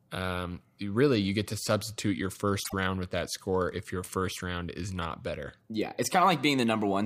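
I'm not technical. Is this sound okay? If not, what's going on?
No. At 2.64 to 2.74 s, between "get to substitute your" and "with that score if", the speech briefly turns into a garbled flutter. This is frames out of order: two tiny neighbouring chunks of sound, each about 26 ms, were played back swapped. Unlike a dropout or skip, nothing is missing and no time is lost. The same sound is there, just briefly shuffled.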